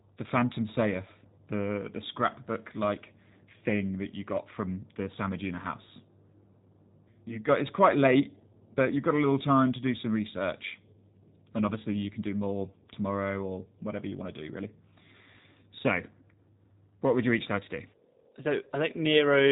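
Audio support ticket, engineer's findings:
G.729 codec damage, whole clip: speech rough and a bit synthetic, clearly audible, nothing above 3.8 kHz. Narrowband VoIP leg rebuilding speech from a vocal-tract filter, pitch predictor and sparse pulses. Sounds like G.729A at 8 kbit/s.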